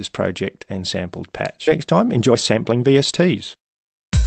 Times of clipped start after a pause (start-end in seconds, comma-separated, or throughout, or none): none